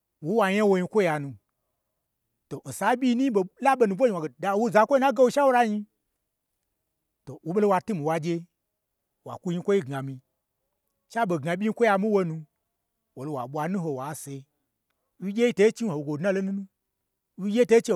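At 11.95 s and again at 14.12 s the speech carries a single sharp click, each showing as a thin vertical line across the spectrum. These are likely dropped samples: a couple of samples vanish from the stream, so the waveform leaps straight to a later value. Unlike a dropout, the loss lasts only a tiny fraction of a millisecond, far too brief to remove any audible sound, so nothing is missing and only the click remains.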